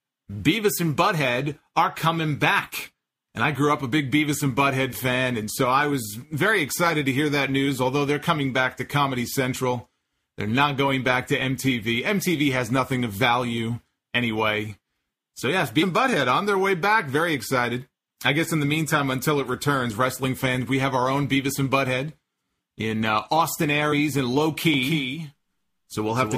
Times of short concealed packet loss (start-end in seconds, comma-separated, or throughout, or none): none